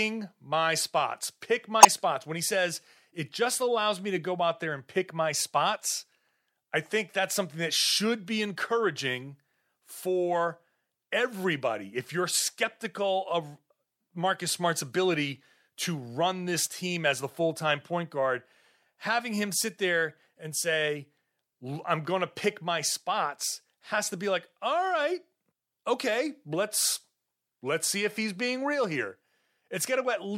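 This is a speech clip with two spots of corrupt frame decoded, where damaged compressed data got played out anyway. The first, at 1.80–1.87 s, spans roughly three frames and is loud, peaking near -5 dBFS, so it's a harsh burst. The second, at 20.09–20.11 s between "guard having him sit" and "and say I'm going", hits about one frame and is faint, around -40 dBFS, just a small blip where misread codes put energy at the wrong frequencies.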